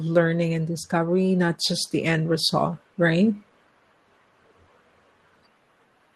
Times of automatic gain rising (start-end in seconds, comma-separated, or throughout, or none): 0.89-3.39